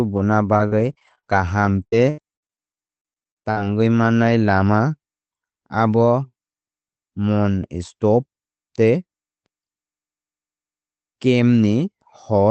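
From 0.53 to 3.65 s, before "mannai lama", repeated packet loss leaves gaps up to 81 ms, patched by repetition: choppy, robotic, not one dropout.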